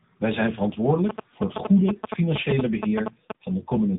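Rough, muffled and warbly throughout, with nothing above 3.8 kHz, this speech shows tandem speech coding. The sound points to two speech coders in a row, likely a Bluetooth-style CVSD link followed by a low-rate AMR-NB mobile leg, the second re-encoding the first's already degraded output. From 1.09 to 3.32 s a galloping dit-dit-dit of short buzzes at about 217 Hz sits at roughly the speech's own level. These are GSM signalling bursts: a nearby 2G phone exchanging short radio bursts with the network, which the audio circuitry rectifies into audible pulses.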